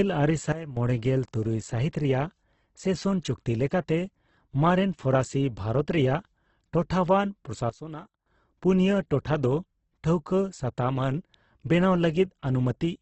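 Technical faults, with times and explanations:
Throughout: Opus compression. The speech is band-limited, with nothing above about 8.1 kHz, and the voiced sounds come across rough and grainy, with noisy texture standing in for clean harmonics rather than swirling holes. That pattern points to heavy damage from the codec's music (CELT) mode at a low rate, which fits roughly 12 kbps. The encoder is likely keeping each band's energy but filling starved bands with folded or noise content.
0.52–0.77 s and 7.70–8.26 s: sudden gain jump. The level drops abruptly, by about 12 dB in the first span and about 14 dB in the second, then steps back up. Speech and background noise fall and recover together, with no fade at either edge, so the change lands between adjacent samples. The likely cause is a digital gain setting or bit shift applied without a ramp, which also makes the edges sound hard.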